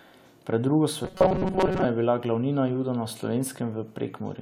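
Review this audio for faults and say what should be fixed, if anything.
Robotic sound from repeated short buffers at 1.05 to 1.85 s, before "je bila glavnina": a rigid 188 Hz buzz, likely from an approximately 5 ms buffer repeated in place of late audio. Prevent it with a larger playback or jitter buffer so audio arrives before it is needed.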